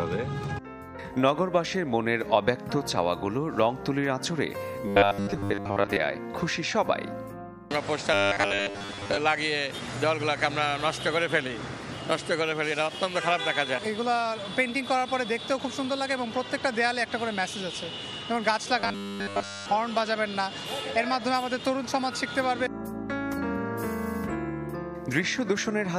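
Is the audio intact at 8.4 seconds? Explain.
No, 8.4 s falls inside a stretch of robotic sound from repeated short buffers, running from about 8.14 to 9.17 s. The audio turns into a rigid, metallic 100 Hz buzz, likely from 10 ms chunks being replayed while most of the real audio is skipped.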